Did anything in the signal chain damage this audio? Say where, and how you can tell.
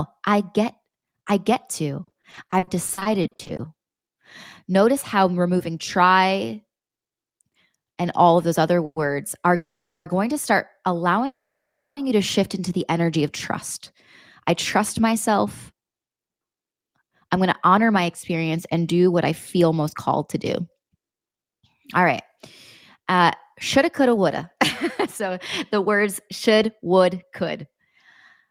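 Yes. Between 2.03 and 3.61 s the speech turns choppy, the typical sound of repeated packet loss (robotic sound) at the network stage. There are 20 separate holes, the longest 40 ms, coming so close together that the receiver's concealment keeps extending the last fragment of sound. About 490 ms of the stretch is synthetic fill and 360 ms of real speech is simply gone, so roughly a third of that span is concealed rather than actual audio.

Three call audio freezes follow, at 8.85–8.98 s (110 ms), 9.56–10.08 s (500 ms) and 11.26–11.99 s (710 ms). Each begins with a short buzzy continuation of the last sound that decays into silence, lasting 40 ms, 410 ms and 640 ms respectively. The speech then resumes exactly where it stopped, with nothing missing. This is likely a network delay that drained the jitter buffer. Each pause adds its full length to the end-to-end latency.

From 15.12 s to the end at 28.50 s, the speech runs at about 106% of normal speed while its pitch stays unchanged. 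This is jitter buffer speed-up. The buffer was holding more audio than its target, so the receiver trimmed many short pitch-period chunks in succession to drain it. Around 0.7 s of audio is removed in total, which gives the delivery a slightly hurried, compressed feel.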